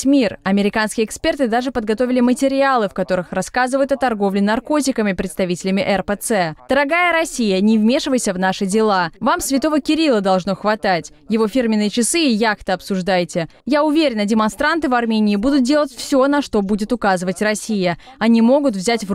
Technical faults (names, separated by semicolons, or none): none